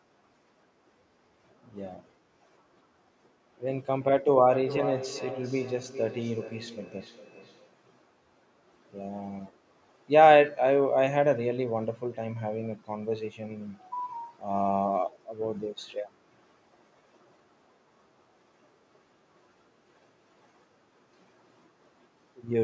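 From 4.49 to 7.8 s the speech returns as a feedback echo between two devices: a second device replays this microphone's sound, which is picked up again, so each syllable repeats roughly every 0.4 s, peaking about 11 dB below the speech, thinner and ringing. A spectrogram shows evenly spaced ghost copies of each harmonic stack.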